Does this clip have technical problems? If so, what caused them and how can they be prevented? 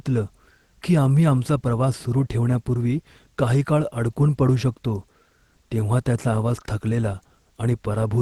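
No, there is nothing to fix or prevent: the speech arrives over a WebRTC call path, and its top end stopping at 12 kHz is consistent with the Opus codec's bandwidth setting.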